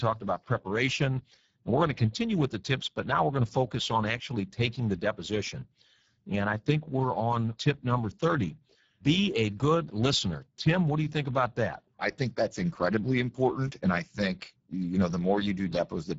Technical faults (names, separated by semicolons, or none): Speex codec